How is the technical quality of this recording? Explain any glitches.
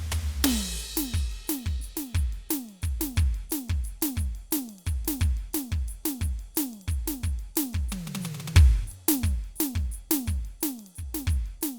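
No glitches or faults can be heard in this music.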